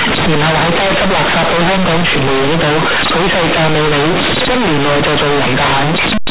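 Speech carried as G.711 A-law, with companded audio read as linear throughout: the logarithmic bytes are played as plain 8-bit samples, so quiet and loud passages swing nearly equally. The result is harsh, buzzy distortion and loud noise in pauses. On a waveform, pauses look almost as full as speech; on a spectrogram, broadband hash fills everything up to the 4 kHz telephone limit.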